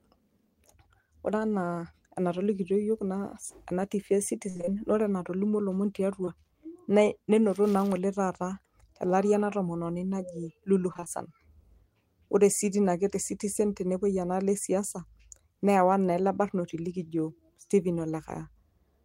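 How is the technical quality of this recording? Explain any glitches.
The recording has three network-related glitches, two bursts of repeated packet loss and one brief concealed dropout.

Repeated packet loss (robotic sound) occurs from 4.49 to 4.69 s and again from 10.93 to 11.08 s. Each stretch holds four gaps, up to 54 ms long in the first and 20 ms in the second. The receiver patches each hole by extending the preceding sound, so synthetic fill covers about 59% and 46% of the spans. The result is choppy, with pieces missing. On a spectrogram, harmonics flatten into repeated, smeared blocks, and the waveform shows a stuttering envelope.

Short concealed packet loss occurs at 6.25–6.29 s, where about 20 ms never arrived in time. The decoder bridged it with roughly 22 ms of extrapolated audio, continuing the last pitch or noise shape before blending back into the real signal. It is heard as a quick smear or wobble. 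A spectrogram shows a narrow, slightly blurred vertical band.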